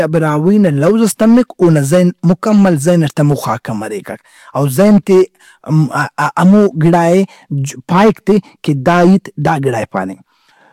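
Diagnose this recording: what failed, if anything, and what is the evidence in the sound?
Hard clipping throughout the speech. The input or converter stage was overdriven by about 8 dB, so roughly one sample in twenty hits the converter's limit and is cut flat. Those squared-off peaks add high harmonics, heard as harsh crackle on louder syllables across the clip.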